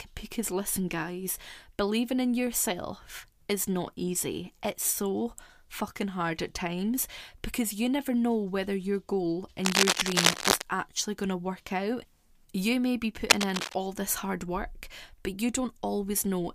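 Cable scratch noise appears from 9.63 to 10.62 s, after "know whether your goal", and again from 13.30 to 13.75 s, after "may be". Dense, uneven scratching rides over the speech, somewhat louder than it, likely from a worn cable or connector whose contact resistance fluctuated as it moved.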